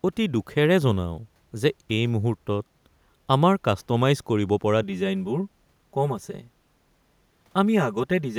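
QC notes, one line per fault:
4.83–8.38 s, channel delay (comb filtering): after "আমাৰ কাষ্ট'মাইজ কৰিব পৰা" the speech turns hollow and phasey. One channel runs around 5 ms late, so the mono sum cancels at evenly spaced frequencies starting near 100 Hz, well above the faint room noise.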